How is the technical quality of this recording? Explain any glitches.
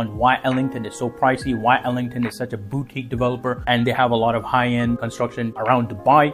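No glitches or technical faults can be heard here.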